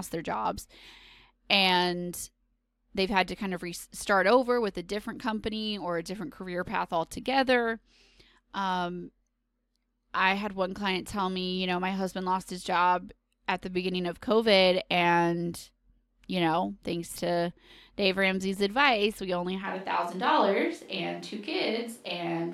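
Speech recording with one fault. At 19.65 s, just after "advice we only", the sound turns roomy, hollow and thin, drops about 5 dB, and picks up background noise around 35 dB below the speech until the end. This is likely a switch to a distant microphone.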